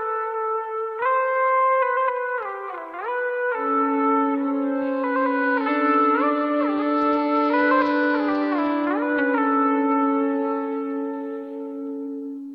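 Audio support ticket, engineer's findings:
Listened through the whole thing and nothing turned up worth flagging, so there's nothing to chase on this ticket.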